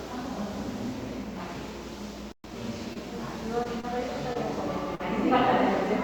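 At 2.32 s the player most likely ran short of data or had its output thread blocked, so a playback stall cuts the sound off in mid-flow. The output stays silent for 120 ms, until 2.44 s, before the sound picks up again.

From 2.44 to 2.56 s the player works off the backlog from that gap with a time-compressed catch-up. It cuts small pieces out and cross-fades the rest, running at twice normal speed. The sound is briefly hurried at its normal pitch.

Short concealed packet loss follows, where audio failed to reach the decoder in time. The receiver patches each hole by extending the preceding sound and blending back in. About 20 ms goes missing at 2.93, 3.63, 3.81 and 4.33 s, and about 40 ms at 4.95 s. Each is heard as a brief smear or wobble.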